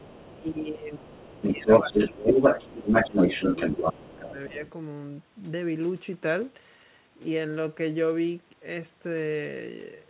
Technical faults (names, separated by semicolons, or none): other side's voice leaking through; speech suppressed in double talk